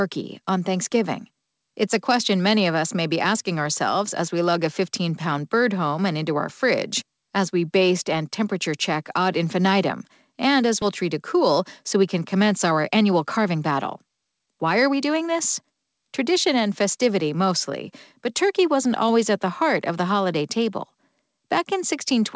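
A speech clip carried over a call path whose band stops at 8 kHz, which fits a wideband codec such as G.722, with two timing faults in its middle. At 10.82 s the receiver threw away a stretch of buffered audio that had fallen behind, and played on from audio already waiting. This is a skip ahead. Around a second of speech vanishes, and nothing is inserted to cover it, so the two sides butt together with no audible gap. That discarded second had been sitting as excess delay. Straight after, from 11.02 s to 15.85 s, the jitter buffer was still holding more audio than it wanted and trimmed short pitch-period-sized pieces repeatedly to drain it. This is a jitter buffer speed-up. Speech runs at about 108% of normal speed with pitch unchanged, shaving around 0.4 s in total and giving that passage a rushed delivery.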